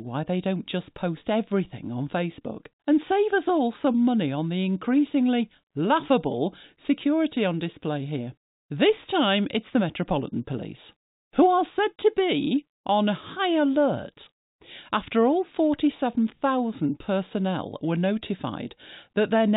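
No technical faults can be heard in the speech, which carries the narrow band of G.711 telephone coding with nothing above 4 kHz and, at most, a faint level-following quantisation noise well beneath the signal.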